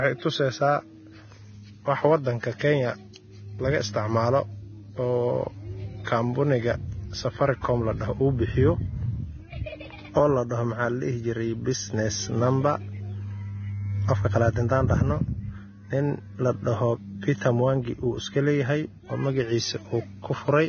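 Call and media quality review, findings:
Whole clip, speech: hissy, grainy treble; sibilants smeared into noise; consonant attacks blurred. Likely heavy Vorbis compression, with coarse residue quantisation swapping treble detail for noise of similar energy. Fits a low bitrate near 18 kbps. Spectrogram: hard ceiling at 6.5 kHz, speckled noisy texture below it, smeared onsets.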